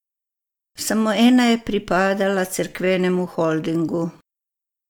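Listening closely to the speech recording, nothing stood out as a technical fault anywhere along its course.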